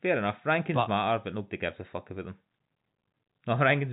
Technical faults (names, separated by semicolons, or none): none